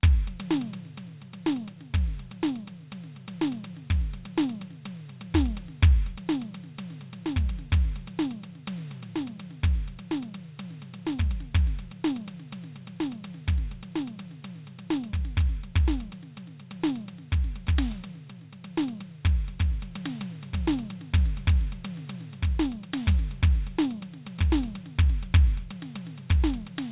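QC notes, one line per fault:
No faults found in this music clip. Nothing here needs a QC note.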